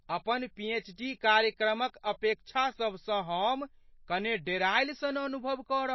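MP3 compression runs from start to finish. The speech has nothing above 5.8 kHz, which leaves it dull, and the damage is plainly audible: a watery, swirling texture where faint frequency components drop in and out from one short block to the next, and s sounds come out thin and chirpy. The likely cause is an MP3 encoder short of bits, fitting a low bitrate around 24 kbps, which cuts the treble at a fixed point and zeroes weaker detail.

Pre-echo appears at 4.45 s. A brief hiss, spread over about 19 ms, runs just ahead of a sharp onset, so the attack seems to arrive early and lands soft and blurred instead of crisp. This happens because the codec spreads its coding noise evenly across each block. The noise level set by the loud onset therefore also covers the quiet moment before it within the same block, where nothing masks it.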